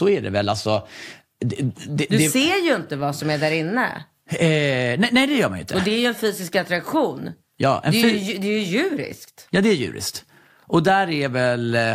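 Nothing goes wrong technically anywhere in this recording; the speech comes through with no faults to point to at any moment.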